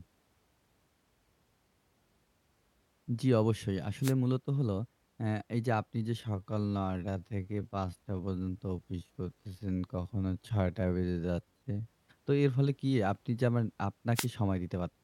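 A speech recording with two short bursts of static, at 4.02 to 4.13 s and again at 14.14 to 14.27 s, each a brief swish lasting about a tenth of a second. These are wireless microphone noise hits: the analogue FM radio link faded momentarily as reflected signals cancelled, letting receiver noise rise over the speech. From 6.17 to 11.91 s the pace abruptly drops to about 0.63 times normal speed while the pitch holds steady, so the speech drags. This is likely a time-stretched section, where software lengthened the passage by repeating short fragments to keep the pitch unchanged.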